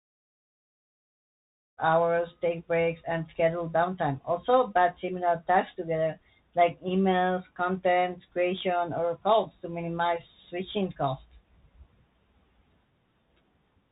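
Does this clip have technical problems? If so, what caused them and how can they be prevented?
Yes. Throughout the speech, the Bluetooth CVSD headset codec is plainly audible. Nothing above 4 kHz survives. Beyond that band limit, the codec's one-bit up-or-down steps can't keep pace with loud high-frequency energy, so sibilants turn scratchy and a granular hiss sits under the speech, which fits a 64 kbit/s CVSD link. That hiss and slope distortion separate it from a simple low-pass filter or narrowband resampling, which would sound dull but clean. Recording with a wired microphone, or a headset using a wideband or higher-quality Bluetooth codec, prevents it. The fade-in near the start is a smooth edit, not a fault.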